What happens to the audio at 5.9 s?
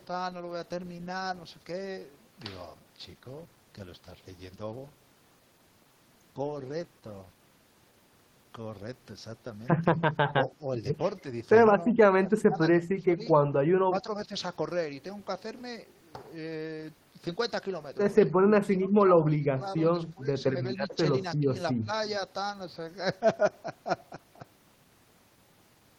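At 5.9 s the speech runs on without any audible fault; nothing at that moment is interrupted, clipped or distorted.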